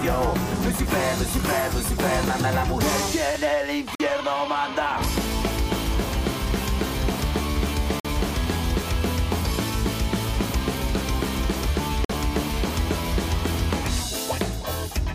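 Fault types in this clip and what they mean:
Gap between chunks: the audio arrives in 4-second pieces, and a hole of about 48 ms separates each piece from the next, so the sound drops out briefly at 3.95, 8.00 and 12.05 s without losing any material. On a waveform these show as short, near-silent flat stretches at even spacing; on a spectrogram they appear as thin vertical blank stripes cutting across all frequencies at the same regular 4-second interval.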